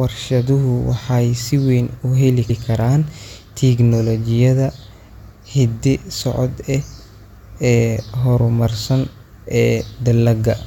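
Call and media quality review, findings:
Repeated frames, 2.49–2.60 s. Stutter in speech: a 116 ms block plays twice. Probable component: encoder output or packet path resending compressed frames, likely a run of five. Adds 116 ms to the clip.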